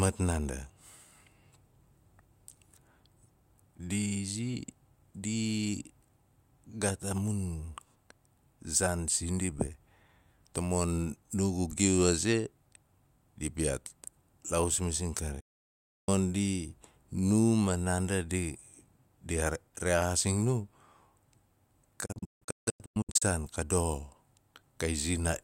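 A digital broadcast dropout hits this speech twice, each time because the receiver stopped getting frames it could decode and muted until clean ones arrived. At 15.40 s the audio fades out over about 8 ms and stays silent until 16.09 s, roughly 0.67 s gone, which fits around twenty frames of about 32 ms each. From 22.06 s to 23.22 s it breaks into several short holes, the longest 160 ms, losing about 0.77 s in total.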